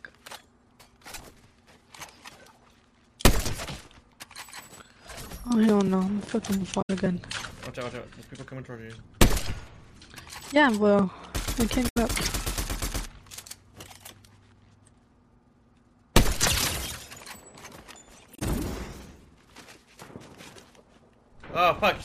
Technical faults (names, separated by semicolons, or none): damaged data in a compressed stream